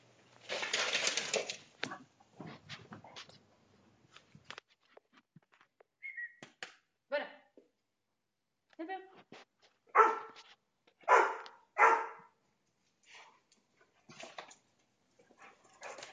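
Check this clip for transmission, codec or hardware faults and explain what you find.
No faults detected.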